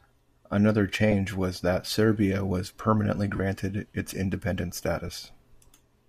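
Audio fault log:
1.12, 3.36 to 3.40 and 5.08 s, lost LE Audio frames: LE Audio frames dropped on the link, so the LC3 decoder refilled each gap by reusing the last spectrum with scrambled signs. Each gap becomes a brief noisy smear. The two single blips fit one 7.5 ms frame each, and the 40 ms gap fits roughly five.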